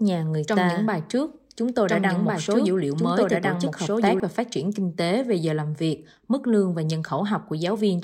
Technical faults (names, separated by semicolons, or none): doubled audio track